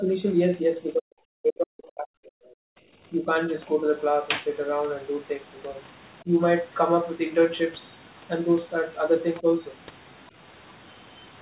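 The speech dips at 0.0–0.23 s, 0.6–2.72 s, 3.11–3.28 s, 6.24–6.32 s and 9.42 s. This is likely speech suppressed in double talk, with the echo canceller ducking the talker. The longest drop goes down by up to about 40 dB. The others dip only about 5–10 dB.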